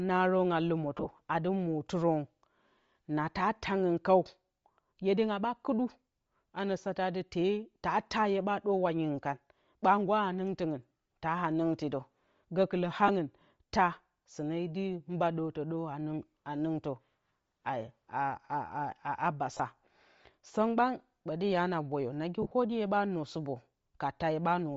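Throughout the 25-second speech recording, the upper spectrum sounds thinned and then partly refilled with noise, giving consonants and vowels a breathy, grainy edge. This is likely Bluetooth LC3 compression at a low rate, consistent with roughly 32 kbps and a short 7.5 ms frame. Bandwidth-limited codecs such as narrowband telephony sound muffled. Here the top end is not simply missing but replaced by hiss-like filler, which is typical of LC3's noise filling.

Lost LE Audio frames then cause brief dropouts. From 0.97 to 1.07 s, about 60 ms of audio is lost in several short gaps spread over 90 ms, none longer than about 20 ms. A single gap of 30 ms follows at 10.88 to 10.91 s, then 15 ms at 13.08 to 13.10 s. From 19.53 to 19.60 s, 45 ms is lost in scattered gaps, the longest about 20 ms. From 22.42 to 22.52 s, 67.5 ms is lost over 90 ms, with the longest run about 40 ms. In each gap the decoder repeats the last spectrum with scrambled phase, so the sound becomes a short noisy smear rather than a hard click or clean silence. 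That smear distinguishes it from a plain packet dropout or a digital glitch.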